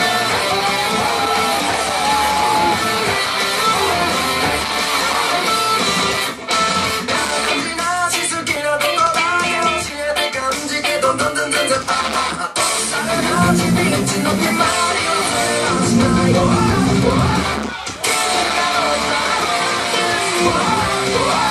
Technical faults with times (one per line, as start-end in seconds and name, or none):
none